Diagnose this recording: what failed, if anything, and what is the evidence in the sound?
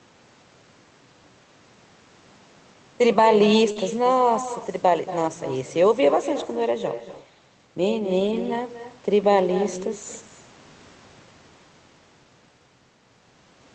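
Echo with no canceller, throughout, at the call-processing stage: every phrase returns about a fifth of a second later, about 12 dB quieter and thinner, because far-end loudspeaker pickup was never cancelled.

Short concealed packet loss at 3.71–3.78 s, in the network and jitter buffer: about 40 ms never arrived, and the decoder extended the preceding sound, leaving a brief smeared wobble.

Lost packet rebuilt from error correction, in the Opus codec, at 3.76 s, 4.60 s and 8.20–8.38 s: low-bitrate redundant copies filled these spots, so the sound turns briefly rougher and noisier without gaps.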